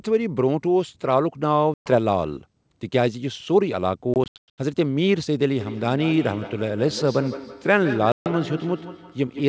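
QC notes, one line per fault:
1.74–1.91 s, 4.14–4.60 s, 8.12–8.28 s, packet loss on an ADPCM call: hard silent gaps of 120 ms, about 300 ms scattered across 440 ms, and 140 ms. Speech resumes slightly distorted while the decoder's predictor and step size resynchronise.
5.6 s to end, feedback echo between two devices: speech recurs about every 150 ms, thinner and ringing, peaking at about 12 dB below the direct speech, as another device replays this microphone back into it.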